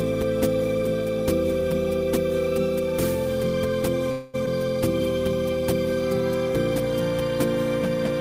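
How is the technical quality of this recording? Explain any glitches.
The recording has two closely spaced glitches just past the four-second mark.

Call audio freeze, 4.11 to 4.36 s: for about 0.22 s the sound stops moving forward and the last moment is stretched into a fading buzzy continuation with no drop to silence. This is likely the jitter buffer running dry while packets were delayed, so the receiver improvised filler. When the audio resumes it picks up exactly where it paused, so nothing is lost, but everything afterwards now runs about 222 ms late.

Skip ahead, 4.46 to 4.48 s: a tenth of a second after the freeze ends, playback abruptly lurches forward. Roughly 100 ms of audio is dropped, with only a brief 8 ms patch bridging the join, so the two sides butt together almost directly and the sound seems to jump. This fits the receiver discarding a stretch of buffered audio to catch up after the freeze, recovering about a tenth of a second of the added delay.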